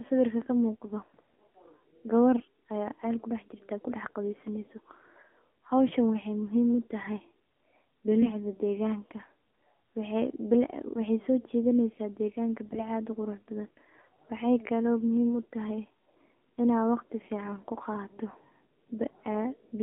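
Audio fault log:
throughout AMR narrowband mobile codec: the speech passed through the AMR-NB mobile codec, apparently around 7.4 kbps, with the line band running 250 Hz to 3.5 kHz. Nothing reaches above that, and the low bitrate leaves the voice plainly buzzy and synthetic, thin at both ends.
2.34 to 2.44 s, 12.66 to 12.81 s AMR bit errors: on a weak link, bits in the less protected part of several 20 ms frames arrived flipped, at a rate of some five to seven percent, while the frames still passed their check. The excitation pulses and fine pitch and gain values decode wrong, so the voice keeps its pitch and level but briefly turns hoarse, scratchy and gargly.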